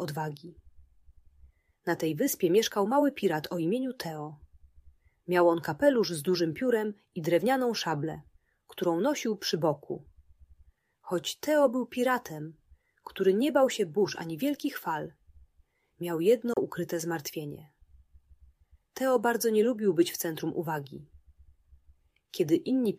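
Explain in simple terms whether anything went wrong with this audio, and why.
At 16.53 s the sound cuts out for about 50 ms and returns at 16.59 s, likely a Bluetooth dropout. Unlike a stall, the audio doesn't pause and resume where it left off. It comes back further along, as if it had kept playing during the silence.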